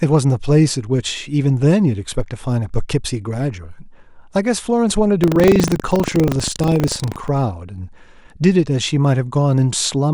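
From 5.2 s to about 7.28 s the speech picks up a rough, robotic rattle at 25 Hz. That's buffer tearing: the write and read positions in the playback ring buffer have drifted into each other, so every 40 ms cycle carries a small slice of stale audio from roughly 70 ms earlier, butted in with hard edges either side. Those repeating seams make the buzz, riding only on the voice.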